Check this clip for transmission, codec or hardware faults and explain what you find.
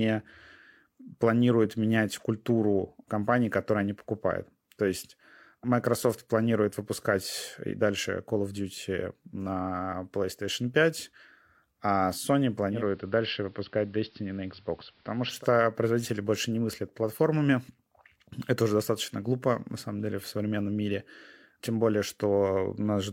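One fault is present.

From 12.68 to 15.46 s the speech turns dull and slightly quieter, about 2 dB down, with a faint hiss roughly 35 dB beneath it. This is digital radio blending to analogue: the receiver lost its digital stream and cross-faded over 192 ms to the station's AM broadcast. AM's narrow bandwidth and noise floor then carry the sound until the receiver blends back to digital.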